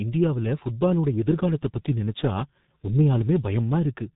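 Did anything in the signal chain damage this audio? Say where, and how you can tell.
Yes, at the codec stage: a G.723.1 codec has heavily damaged the whole speech clip. A spectrogram shows a hard ceiling at 3.8 kHz throughout, with smeared consonant energy. It sounds muffled and hoarse, which fits a coder near 6 kbit/s updating its voice model only once per 30 ms frame.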